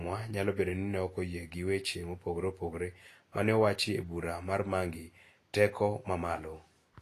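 Speech clip with plainly audible Vorbis compression throughout: hissy, grainy treble and nothing above 14.2 kHz, likely from low-bitrate encoding, fitting roughly 33 kbps.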